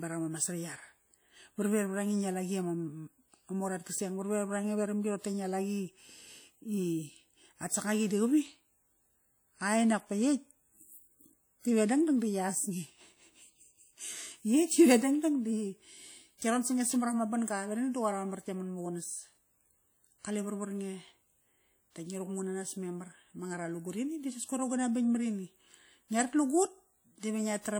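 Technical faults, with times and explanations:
Throughout, WMA compression. The speech rings and sounds washy. A hiss swells and fades with the signal. Coding noise smears across tens of milliseconds around each sound. The cause is likely a simple WMA encoder at a low bitrate, consistent with about 48 kbps.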